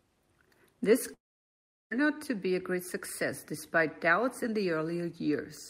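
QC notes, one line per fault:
1.13 to 1.93 s, long network dropout: the speech stops arriving at 1.13 s, the last sound gets stretched into a short fading buzz, and then it's basically dead air for about 0.73 s before the talker comes back at 1.93 s. Roughly 0.78 s of speech is simply gone, so the resumption jumps ahead. That pattern of a concealment tail, then silence, is likely a packet stream that stalled for most of a second.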